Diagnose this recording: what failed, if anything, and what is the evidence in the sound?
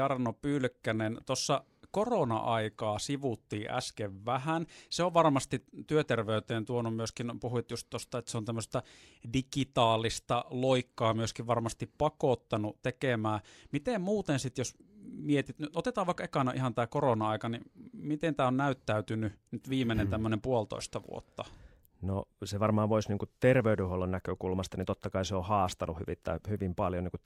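No fault heard in this recording.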